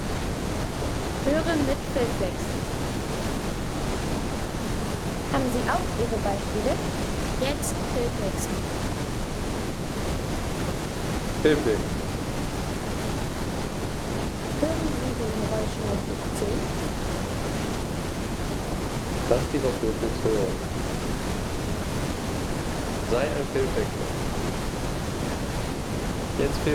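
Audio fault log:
No fault can be heard anywhere in this audio. There is nothing to log.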